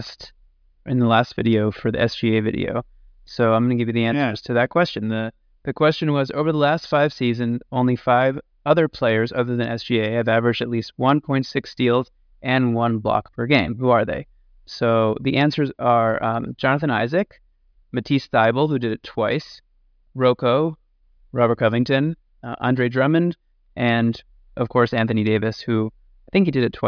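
No technical faults can be heard in the speech recording, and the signal holds steady throughout with nothing that points to a problem anywhere along its path.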